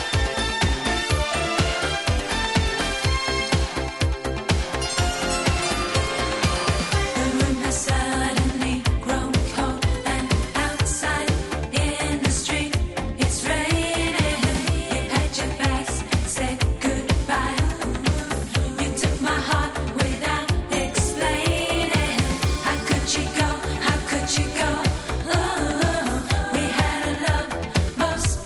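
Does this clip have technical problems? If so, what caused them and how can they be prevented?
Yes. From 20.9 to 22.95 s the sample-rate converter was apparently restarted on every block, converting each chunk in isolation, which fits a 24 kHz to 48 kHz upsample in 50 ms blocks. At each block edge the converter had no true neighbouring samples to work from, so every boundary carries a small error. The result is a rough, buzzy ticking at 20 Hz riding on the sound. Prevent it by running one continuous resampler that carries its filter state across blocks.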